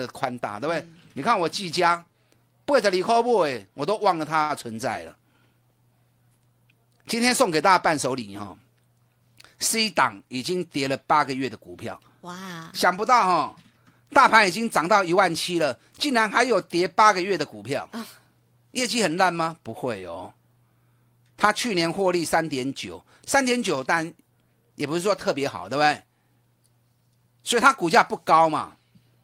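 Speech, with two timing faults from a jitter buffer. At 4.42 s there is a short stall from a late packet. A packet failed to arrive on time and the buffer ran dry. The receiver held the last sound for about 73 ms, until 4.51 s, then carried on from where it stopped. Nothing is lost. The sound is simply drawn out, with a faint buzz or dip where it stretches, and the delay grows by that same 73 ms. From 15.17 s to 16.22 s comes a jitter buffer speed-up. The buffer had built up more audio than it aims to hold, and the receiver trimmed it back. It cut many tiny slices, each one or a few pitch periods long, in quick succession. Together they remove around 50 ms. The speech plays about 5 percent fast at unchanged pitch, so this stretch sounds slightly hurried.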